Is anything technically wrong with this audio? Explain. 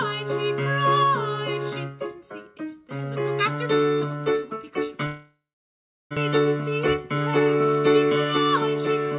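Yes, two faults.

From 5.06 to 6.19 s there is a long network dropout, likely caused by packets failing to arrive for about a second. The receiver had nothing to decode, so it stretched the last sound into a fading buzz or hiss and then gave up, leaving silence for roughly 0.7 s. When audio returns, about 1 s of material is gone. The stream also resumes with the playout delay shifted by around 50 ms.

From 6.74 to 7.41 s comes a jitter buffer speed-up. After the gap, the receiver was holding more audio than its target, so it trimmed small pitch-period-sized chunks repeatedly to drain the excess, about 50 ms in total. The sound plays at roughly 107% speed with unchanged pitch, giving a briefly rushed, hurried feel.

The band limit at 4 kHz throughout fits a narrowband call codec such as G.711 at 64 kbps.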